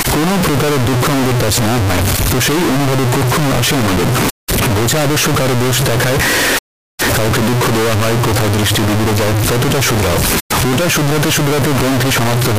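Float read as integer runs from start to finish. The speech is extremely loud and harsh, flattened into a near-square waveform sitting at an almost fixed, high level, with background noise pushed up to the same level as the voice. The likely cause is 32-bit float samples interpreted as 32-bit integers, so each sample's sign and exponent bits, not its true amplitude, set the output value. Pitch can still be followed through the distortion.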